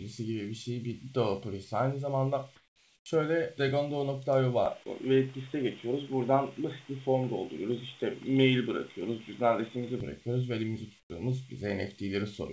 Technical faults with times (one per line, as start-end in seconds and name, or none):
2.56-3.06 comfort noise in place of the background
3.04-3.06 onset clipped by the voice detector
4.66-10.00 input switched to a poorer device
11.00-11.10 comfort noise in place of the background